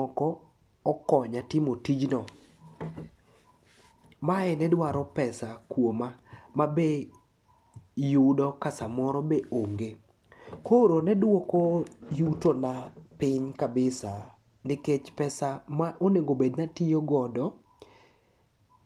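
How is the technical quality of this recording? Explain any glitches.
The quality is disrupted by one glitch, a call bitrate drop, from 12.03 s to 14.81 s, just after "ne duoko" and ending before "pesa ma onegobed". The call's bandwidth estimate fell and the encoder was forced onto a much smaller bit budget for about 2.7 s. The sound fits a drop from roughly 48 kbps to 16 kbps. Coding becomes coarser and the top end is trimmed, so the speech turns rough, watery or muffled until the rate climbs back.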